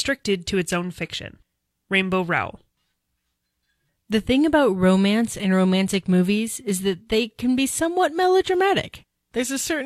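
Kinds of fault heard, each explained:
Nothing stood out on listening to this speech.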